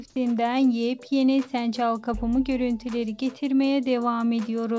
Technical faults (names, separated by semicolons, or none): none